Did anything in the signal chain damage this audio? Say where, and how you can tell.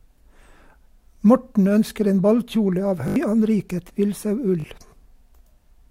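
Yes, a repeated buffer at the driver stage: stutters at 3.08–3.16 s and 4.6–4.64 s replay one short piece with hard joins, consistent with 20 ms buffer underruns.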